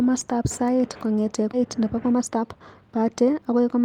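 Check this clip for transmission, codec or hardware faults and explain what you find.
Two transmission faults show up in this speech clip.

At about 1.53 s, just after "sait kongete", a skip ahead occurs: the speech jumps abruptly forward with no gap or fill, losing roughly 0.7 s of audio. A stretch of speech was dropped while later speech was already waiting, and the two sides of the cut are spliced almost directly together.

From 1.65 s to 3.53 s a jitter buffer speed-up follows: the speech runs noticeably hurried, about 117% of normal speed, yet keeps its pitch. The buffer was holding too much delay, so the receiver repeatedly trimmed short pitch-period pieces, removing roughly 0.3 s in total.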